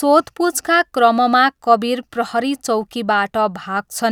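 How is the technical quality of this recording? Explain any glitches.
The recording's technical quality is good, with no glitches to explain.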